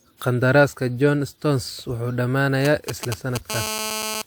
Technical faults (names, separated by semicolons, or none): GSM signalling bursts; GSM phone buzz